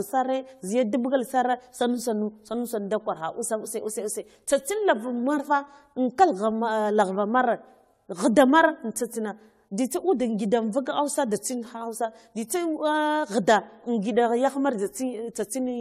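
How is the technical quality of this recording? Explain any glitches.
The speech is degraded throughout by generation loss. It sounds swirly, hollow and smeared, with blurred attacks and nothing above 17.1 kHz. This likely comes from roughly seven passes through an AAC-type codec, consistent with about 96 kbit/s.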